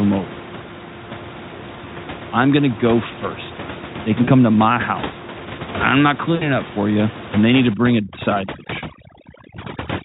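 At 4.23 to 4.29 s and 6.35 to 6.50 s, VoIP packet loss concealed by the speech codec: gaps of about 40 and 60 ms, which fits two and three lost 20 ms frames, are filled by decoder extrapolation, giving a brief buzzy or noisy, fading smear. From 7.74 s to the end, overdone noise removal suppresses the room noise, which sits about 12 dB below the speech, so aggressively that the background collapses into twinkling specks.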